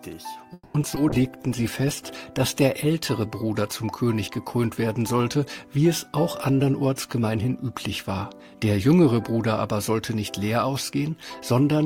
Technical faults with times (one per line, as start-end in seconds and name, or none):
0.53-0.76 call audio freeze
0.82-0.98 short concealed packet loss
1.10-2.72 call bitrate drop
1.49-2.00 jitter buffer slow-down
6.50-8.73 jitter buffer speed-up